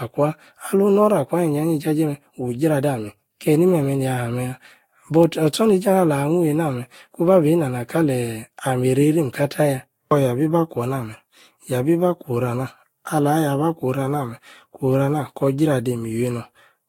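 Throughout the speech, the sound is swirly, smeared and hollow, with blurred attacks and nothing above 16.6 kHz. This is likely generation loss: repeated lossy encoding, consistent with about five Vorbis passes near 62 kbit/s, each requantising on a shifted frame grid so artefacts accumulate.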